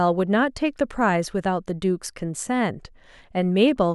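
Nothing in this speech recording stood out as a technical problem on listening.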